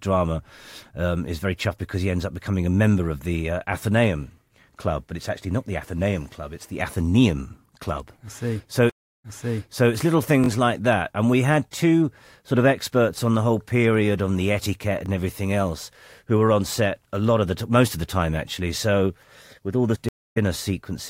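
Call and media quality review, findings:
Stream reconnect at 8.90 s and 20.09 s: dropouts of 341 ms and 272 ms. Player rebuilt the decoder mid-stream. The first resumes about 0.68 s early and repeats sound; the second picks up roughly where it left off.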